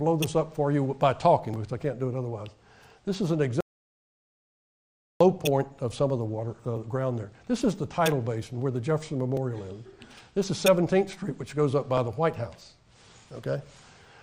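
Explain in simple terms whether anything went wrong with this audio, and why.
Something did go wrong: there's an audio dropout to silence from 3.61 to 5.21 s, about 1.6 s where the sound cuts out to dead silence, with no room tone at all. The input was likely lost briefly, so whatever happened in that stretch is gone.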